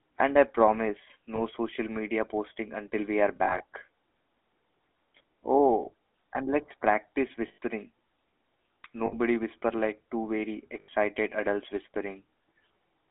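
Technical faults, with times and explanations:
throughout, GSM full-rate codec: The speech has a plainly audible buzzy, gravelly roughness, consistent with the 13 kbps full-rate coder. It models the vocal tract and excites it with a sparse, regularly spaced pulse train, so fine detail becomes grainy. On a spectrogram the energy sits in a band from 250 Hz to 3.6 kHz, with blank space above and below. The harmonics look smeared and coarse instead of cleanly striated.
1.36–1.40 s, 3.36–3.63 s, 7.48–7.58 s, 9.06–9.15 s, 10.80–10.89 s, lost GSM frames: At each of these points the decoder lacked good data and repeated the last good frame's settings. The sound freezes into a short, rough, metallic ring. The first event fits a single 20 ms frame. The others total 60 to 100 ms, and at 3.36 s the losses are scattered across 240 ms in short bursts of up to roughly 40 ms. On a spectrogram these appear as flat, smeared horizontal streaks.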